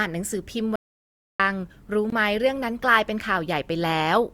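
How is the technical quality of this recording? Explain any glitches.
The recording has two clear glitches, both holes where the speech vanishes into complete silence.

From 0.76 to 1.40 s the speech cuts out mid-flow for about 0.64 s, with no room tone underneath, then resumes abruptly. This audio dropout to silence most likely came from the input signal being lost while recording continued writing zeros, so that stretch of speech is gone.

At 2.10 s a short hole of about 21 ms snaps in and out with no fade. This block of digital silence comes from a buffer left unfilled in time and output as zeros; its length fits a 1024-sample buffer.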